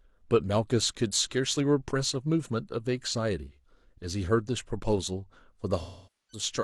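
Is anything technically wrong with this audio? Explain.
Yes. From 5.81 to 6.43 s the speech has AAC frame loss with concealment. About 470 ms of frames, roughly a dozen, went missing, and the decoder rebuilt them from the last good spectrum. Over that stretch the sound smears, decays toward silence, then fades back in, unlike a plain dropout's abrupt cut.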